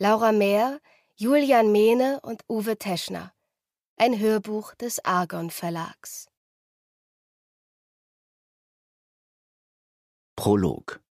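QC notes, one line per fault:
Nothing wrong turned up anywhere in this one, so there's nothing to log.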